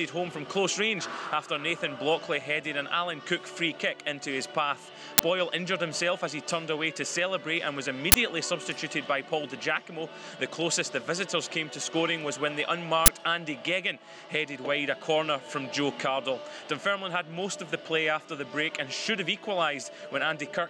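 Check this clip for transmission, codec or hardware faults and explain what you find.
Three brief faults of one kind turn up, all uninitialised buffer bursts. At 5.18–5.20 s, 8.12–8.14 s and 13.06–13.08 s, a 20 ms block plays before audio is written into it, so stale memory contents come out as samples. Each is a sharp, loud crack of digital noise.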